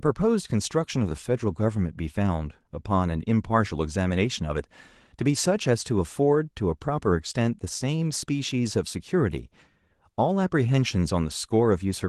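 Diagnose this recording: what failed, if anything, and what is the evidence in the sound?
Nothing in the chain seems to have failed here; the speech runs along without a single glitch worth pointing at, so there's no stage to blame and no evidence to report.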